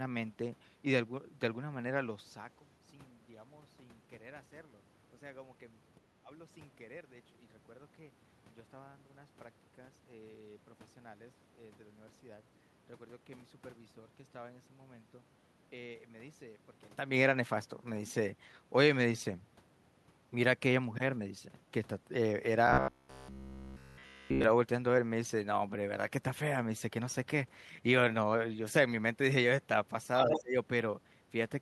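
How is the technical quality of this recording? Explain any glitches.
There are a few real glitches here, mostly clustered near the end, plus one longer robotic stretch in the middle.

At 6.22 to 6.31 s the speech dips by about 15 dB for roughly a tenth of a second. That's likely speech suppressed in double talk: the echo canceller couldn't tell the talker from loudspeaker echo and ducked both.

From 22.67 to 24.44 s the speech turns into a rigid metallic buzz around 66.8 Hz. That's robotic sound from repeated short buffers: nearly everything is a loop of the last chunk, which fits a roughly 15 ms buffer, and the likely cause is audio arriving too seldom.

At 30.17 to 30.41 s the other side's voice leaks through at about 5 dB below the talker, likely residual loudspeaker echo the canceller didn't fully remove.

Overlapping that, from 30.31 to 30.56 s, the speech is suppressed in double talk again, dropping about 20 dB for around 200 ms, likely as both sides collide.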